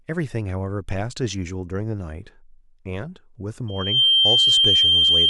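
At 3.68 s a loudspeaker feedback squeal begins, lasting to 5.30 s. The microphone is hearing its own loudspeaker. Around 3.2 kHz the loop gain passes one. A thin tone swells in about a third of a second to about 10 dB above the speech.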